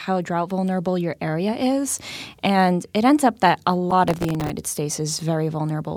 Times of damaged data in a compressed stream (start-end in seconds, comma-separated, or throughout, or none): 3.90-3.93